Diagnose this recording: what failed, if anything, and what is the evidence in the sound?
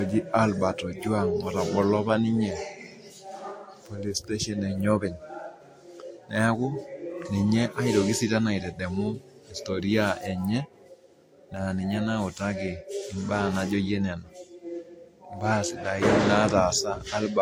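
Transcoding between lossy codecs affects the speech throughout, at the codec stage. Nothing survives above 16.6 kHz, and two sets of coding artefacts are heard together, which points to a Vorbis encode likely re-encoded as WMA. The second encoder spends bits on the first's damage and adds its own.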